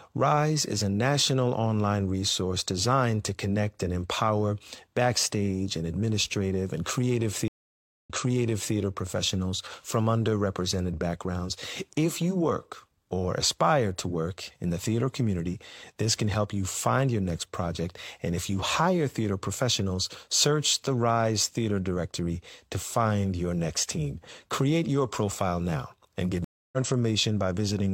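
Stream reconnects occur at 7.48 to 8.75 s and 26.44 to 26.77 s. Each time the connection dropped and a fresh decoder restarted mid-stream. After "and administrative and creative", 0.57 s of silence gives way to speech resuming 0.70 s earlier, repeating material. After "profile now and get", 0.28 s of silence jumps forward roughly a fifth of a second.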